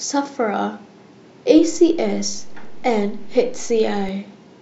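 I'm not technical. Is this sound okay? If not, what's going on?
No. A DC step at 1.58 s shifts the waveform's resting level off zero until 4.09 s, giving a low thump at each jump while the speech continues unchanged.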